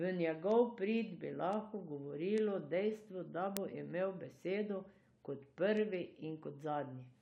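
A receiving device is running on its own clock rather than locking to the sender's word clock, and the two drift apart by something on the order of 150 parts per million. Each time they slip past one another, a single sample is dropped or repeated. In this speech clip that produces word clock ticks from 0.18 s to 7.13 s: about forty sharp clicks arriving steadily, roughly every 0.15 s, some noticeably louder than others.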